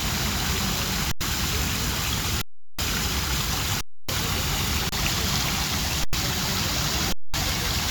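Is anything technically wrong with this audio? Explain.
Yes. There are six underruns with held sample, at 1.12 s (93 ms), 2.42 s (372 ms), 3.81 s (279 ms), 4.89 s (31 ms), 6.04 s (93 ms) and 7.12 s (213 ms). Each time the output buffer ran dry, so the converter froze on its last value. The sound stops dead, then resumes after a similar stretch of live audio was skipped. On a waveform each gap is a flat line, often offset from zero. On a spectrogram it is an empty vertical band.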